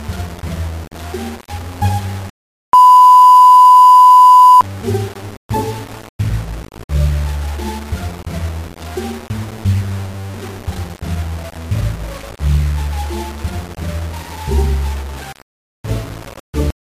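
From start to finish, grainy distortion follows the sound at about 20 dB below it. This is low bit depth without dither, likely from rounding that fits 5 bits. The waveform shows staircase steps, and the spectrogram shows broadband hash tracking the signal.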